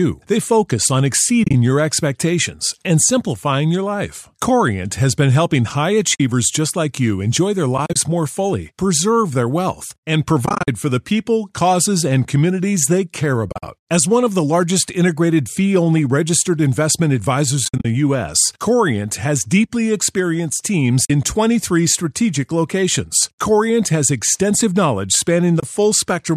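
AAC frame loss with muting opens soft-edged holes at 1.44, 6.15, 7.78, 10.46 (after "preserve their wealth and"), 13.50, 17.65 (after "fee only registered investment"), 21.05 and 25.60 s (after "has extensive knowledge"). Lost frames decode as silence, so the sound fades out and back in. This fade distinguishes it from hard sample dropouts.

The speech carries light coding texture, likely from low-delay AAC at about 64 kbps.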